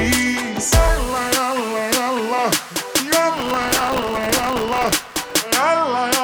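From 3.37 s to 5.42 s the sound is overlaid with a dense, gritty crackle, a processor overload crackle. The processing could not finish its audio buffers on time, and deadlines were missed repeatedly for about two seconds. Each miss left a fragment of stale audio repeated with hard edges. The rapid texture points to very short buffers of roughly a millisecond and a half, with something like a couple of hundred misses. The tearing stops once the overload ends.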